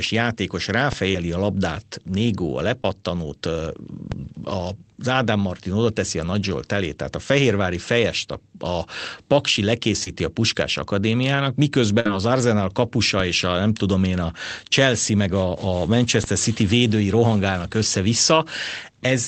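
Short concealed packet loss in this speech recording occurs at 1.11–1.14 s, 2.82–2.85 s and 10.04–10.07 s: roughly 10–30 ms of audio never arrived, and the receiver extended the preceding sound to cover each gap, leaving brief smears or wobbles. A burst of packet loss at 12.00–12.06 s drops about 50 ms in a row. Concealment holds and fades the last sound before playback resumes further along, with that stretch missing. DC steps at 4.12 s and 16.24 s each shift the waveform's zero line abruptly. That produces a low thump, after which the offset decays away over a fraction of a second, as a very low high-pass around 2 Hz would drain it. All of this sits on a call-codec path whose top end stops near 8 kHz, which fits Opus wideband coding at a modest bitrate.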